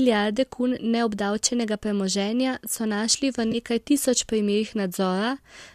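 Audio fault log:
3.52–3.55 s AAC frame loss with concealment: between "premoženja so našli v" and "tisoč primerih", the speech briefly turns smeared and noisy. About 20 ms of audio was lost, which fits two missing frames of roughly 10 ms each, a size that points to the low-delay AAC coding likely behind the light coding damage elsewhere. The decoder covered the gap by reusing the last good spectrum with scrambled phase, so the detail blurs rather than dropping to silence.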